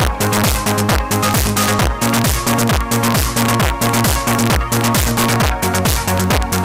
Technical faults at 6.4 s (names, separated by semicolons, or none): integer overflow